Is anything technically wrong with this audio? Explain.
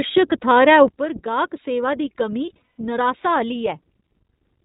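Yes. Throughout, the speech sounds band-limited and slightly rough and synthetic, with plainly audible iLBC codec damage: nothing passes above 4 kHz, and each short frame's excitation is coded independently, which fits 20 ms frames.

At 0.88 s, speech and background noise drop together by about 9 dB and stay lower to the end. This sudden gain jump likely comes from a gain change applied without a ramp.

From 2.46 to 2.80 s, the sound turns into a held, buzzy vowel-like tone. These are lost iLBC frames, about 200 ms missing in total, with the longest run around 150 ms. The decoder repeated the last pitch cycle mixed with noise and recovered almost at once.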